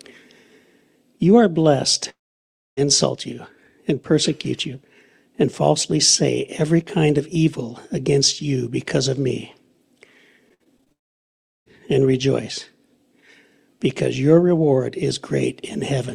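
At 2.09 s the audio cuts out for about 0.68 s, likely a long network dropout. A brief fading continuation gives way to roughly 0.62 s of silence, a flat waveform and an empty spectrogram band.

From 10.49 to 10.92 s, repeated packet loss gives a choppy texture. Seven short holes, the longest 59 ms, are patched with smeared repeats covering about a third of the span, visible as stuttering vertical seams.

At 10.92 s what is likely a second long network dropout follows. About 0.74 s is lost, nearly all of it silent, appearing as a blank gap before the audio resumes at 11.68 s.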